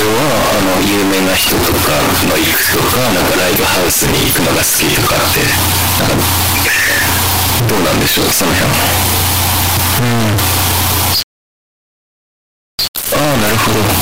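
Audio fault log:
throughout, float read as integer: likely 32-bit float samples decoded as 32-bit integers, so the speech becomes a near-square, very loud, harsh waveform with noise as loud as speech.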